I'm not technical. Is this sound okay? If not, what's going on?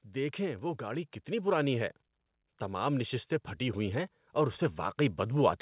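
No, not quite. Twice, from 0.12 to 1.93 s and again from 2.66 s to the end, you get automatic gain rising: the call's volume control thought things were too quiet and slowly turned itself up, so voice and background swell louder together. The muffled, phone-line sound is just the call link itself.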